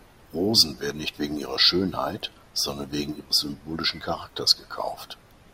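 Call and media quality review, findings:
Single sharp click at 2.56 s in the speech. Dropped samples: roughly one sample missing, waveform jumps straight to a later value. Too brief to remove any audible sound. Thin vertical line across the spectrum. Likely a brief capture or buffer-handoff glitch.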